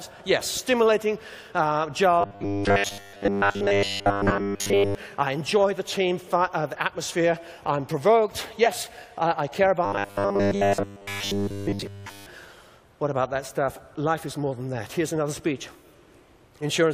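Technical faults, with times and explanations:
2.21–4.95 s and 9.85–12.26 s: robotic sound from repeated short buffers. The audio becomes a rigid, metallic buzz pitched at 100 Hz. That pitch matches a segment about 10 ms long being replayed over and over. New audio is likely arriving too seldom, so the player fills the gaps with repeats and skips real material. In the first stretch, most of the sound is repeated. In the second, nearly all of it is.
8.65 s: compressed frames skipped. The audio jumps ahead by about 50 ms, a span of whole compressed frames going unplayed. The missing frames were either absent from the stream or rejected by the decoder as damaged.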